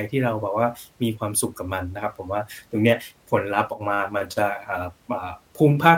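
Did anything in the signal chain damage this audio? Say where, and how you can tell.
Yes. One channel drops out briefly, most likely from an intermittent connection in the analogue wiring or a connector on one leg of the stereo path. From 3.73 to 3.81 s, about 76 ms, the speech suddenly falls by about 6 dB and then snaps back. Once the two channels are summed to mono, losing one of them halves the shared signal, which is exactly that 6 dB drop. Anything present only in the lost channel vanishes for that moment.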